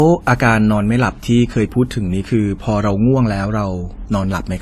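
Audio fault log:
throughout, transcoding between lossy codecs: the speech likely passed through two lossy encoders, a low-rate AAC pass and then a WMA pass at about 96 kbit/s. The second encoder spends bits on the first's artefacts and adds its own, so the two sets are heard together, and nothing is heard above 14 kHz.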